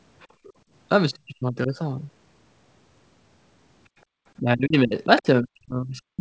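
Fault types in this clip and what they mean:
Background gated by the echo canceller: The room sound is pulled down sharply while the far end plays, then returns when the canceller releases. From 0.31 to 0.56 s it sinks by about 16 dB over roughly a fifth of a second, and at 4.05 to 4.13 s it briefly drops by about 29 dB. Unlike double-talk suppression, it is the ambience that vanishes, not the talker's own speech.
Speech suppressed in double talk: Here the talker's own speech is attenuated, not just the background. From 1.25 to 1.72 s it dips by roughly 25 dB for around 300 ms in total, and from 4.41 s to the end it is pushed down much harder, by roughly 40 dB. This is likely the echo canceller mistaking the talker's speech for loudspeaker echo while both sides talk at once.
Other side's voice leaking through: Rather than a loss, this adds sound that doesn't belong. For an instant around 5.18 to 5.22 s, a second voice slips into the microphone signal at roughly 15 dB below the talker's speech, in the middle of the suppressed stretch. 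It is likely far-end audio from the loudspeaker that the echo canceller failed to remove completely, which sets it apart from the gating and suppression faults.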